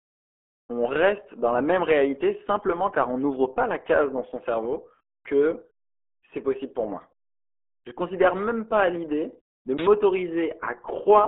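Throughout, the speech has passed through the RealAudio 14.4 codec, a dial-up-era coder whose heavy damage fits an 8 kbit/s stream. Its narrow band runs from 250 Hz to 3.4 kHz, with nothing above 3.8 kHz, so the speech sounds muffled and gargly.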